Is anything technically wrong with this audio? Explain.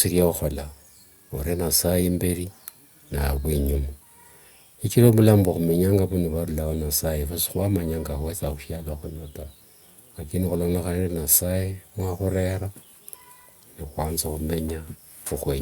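No, nothing technically wrong can be heard in this speech recording. No fault of any kind turns up anywhere in the clip.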